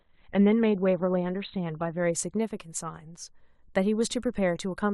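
Speech that sounds muffled and smeared for its first 2.0 s, with nothing above 4.2 kHz, then turns suddenly clear with no gap: an adaptive stream starting at a low bitrate, which fits the player opening on a 12 kbit/s Opus version before switching to 64 kbit/s.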